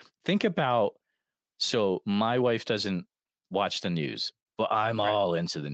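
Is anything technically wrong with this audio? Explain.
No, nothing technically wrong here.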